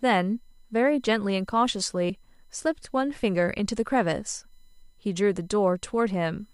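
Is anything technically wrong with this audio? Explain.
Yes, two things stand out.

There's USB whine under the whole clip: a steady tone at 1 kHz, loudest at its 4 kHz harmonic and sitting faintly beneath the speech. That's the 1 ms USB frame timing leaking into the audio through shared power or ground, so you get a fixed-pitch whine.

At about 2.1 s, compressed frames are skipped. A couple of frames, which fits a 32 ms frame length, never got played, so the speech jumps ahead by roughly 70 ms.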